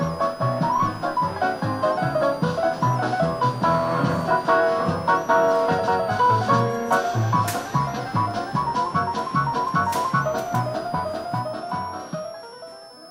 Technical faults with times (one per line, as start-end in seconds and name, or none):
0.00-13.10 switching supply whistle